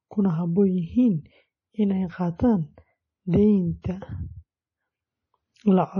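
Right from the start the speech sounds watery and a bit swirly, with nothing above about 10.4 kHz. That's most likely heavy MP3 compression, consistent with a low bitrate around 32 kbps. The encoder runs short of bits, cuts the top end, and lets weak frequency components flicker between frames.

At 3.82 to 3.84 s there's pre-echo: a short hiss about 25 ms long creeps in just ahead of a sharp onset. The codec spreads the noise meant for the loud attack across the quiet moment before it, so the attack itself sounds smeared.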